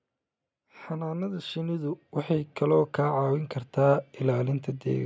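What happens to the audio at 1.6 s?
At 1.6 s you're right in the middle of an automatic gain rising episode that runs from about 0.55 s to 3.44 s. The call's gain control decided the input was too quiet and started turning itself up, climbing by about 11 dB over those three seconds. So the speech and the background noise swell together, with no jump, just a steady creep in level that's still underway at that point.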